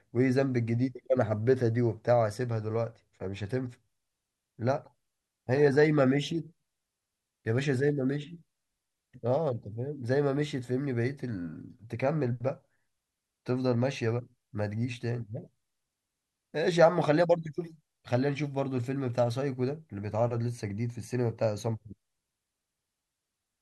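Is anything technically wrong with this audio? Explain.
No, nothing technically wrong stands out in this speech recording.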